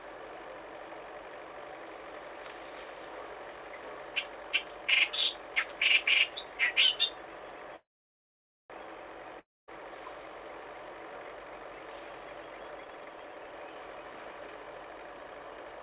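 Call audio band-limited to nothing above 4 kHz, which fits G.711 A-law at 64 kbps. At 7.76 s a call audio freeze sets in: the last sound continues as a fading buzz and then about 0.85 s of silence, until the audio resumes at 8.72 s from where it stopped. The likely cause is delayed packets draining the jitter buffer, so a 0.94 s gap is inserted and nothing is lost. From 9.40 to 9.70 s a long network dropout produces a short decaying tail and roughly 0.22 s of silence. The audio then returns about 0.28 s further on, with that stretch missing, likely because packets never arrived. Between 12.85 and 15.74 s a jitter buffer speed-up makes the audio run at 132% speed with unchanged pitch. Short pitch-period pieces are repeatedly cut out, removing around a second to reduce the accumulated delay.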